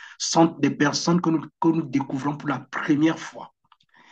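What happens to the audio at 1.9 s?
Nothing goes wrong at 1.9 s; the speech runs on intact through that moment, with no dropout, click or distortion to be heard.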